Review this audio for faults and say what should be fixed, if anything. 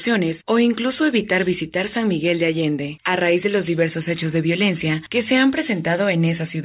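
No faults detected; nothing to fix.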